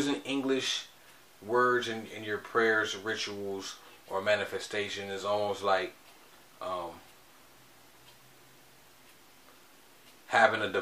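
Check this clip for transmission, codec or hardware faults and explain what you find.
I find no faults to explain in this clip.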